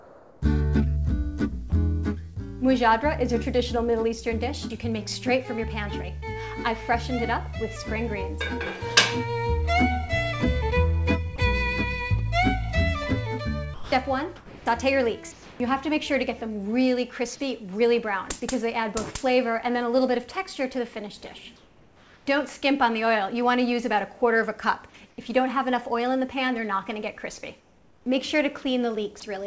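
From 0.00 to 2.38 s the sound is chopped, most likely by the sender's voice detector switching transmission on and off more than once. About 0.46 s of material in this stretch is replaced by comfort noise. Quieter parts and the edges of sounds disappear. The result is a choppy, uneven opening.

At 6.20 to 6.24 s there is a short concealed packet loss. About 20 ms of audio did not reach the decoder in time, and the receiver covered the gap with roughly 21 ms of extrapolated signal before blending back into the real stream. It comes across as a brief smear or wobble, and a very short transient in that spot can be lost.

Sound is then dropped by the voice detector at 11.36 to 11.38 s and again at 13.74 to 13.92 s. In each case the detector likely treated low-level sound as background and stopped sending, so 20 ms and then 180 ms of real sound are replaced by steady comfort noise. The first is a small bite out of the sound. 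The second is a longer gap before transmission resumes.

Comfort noise replaces the background from 13.74 to 15.60 s (about 0.76 s of it synthetic), 21.56 to 22.26 s, 25.10 to 25.18 s and 27.60 to 28.06 s. During these pauses the sender likely stops transmitting apart from occasional updates, and the receiver plays noise shaped roughly like the room. The real background, sitting about 31 to 35 dB below the loudest parts, turns into a flat, featureless hiss. That hiss is about 4 dB quieter in the second and third stretches and about 5 dB quieter in the last. Throughout, the G.722 call path at 64 kbit/s leaves nothing above 8 kHz.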